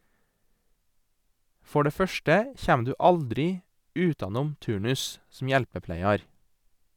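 No technical faults are audible anywhere in the recording.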